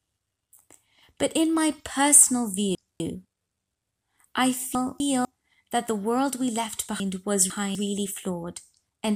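Chunks out of order: a 250 ms block of this speech reaches playback one chunk late at 2.75–3.25 s and 4.75–5.25 s, and two chunks late at 7.0–7.75 s. Nothing is lost, but the swapped segments sound jumbled.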